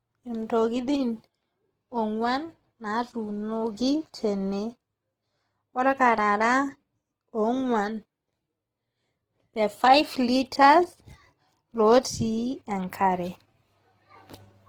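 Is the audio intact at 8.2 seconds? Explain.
No. At 8.2 seconds, as across the whole clip, the speech sounds grainy and rough, with a noisy texture over the voiced sounds, though the top end stays open up to about 20.2 kHz. This is likely Opus compression in its CELT music mode at a rate that fits roughly 16 kbps. Short of bits, the encoder keeps each band's energy but fills the detail with folded copies of lower bands or with noise, producing that plainly audible graininess.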